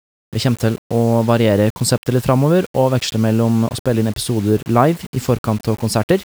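A short speech recording carries low bit depth without dither from start to finish: grainy distortion rides on every sound and tracks its level, so quiet passages turn gritty and the softest tails sputter or drop to silence, with the error about 25 dB below the signal. The likely cause is rounding to very few levels, which fits 6-bit quantisation. A waveform would show visible stair-steps, and a spectrogram would show signal-dependent broadband hash that vanishes in pauses.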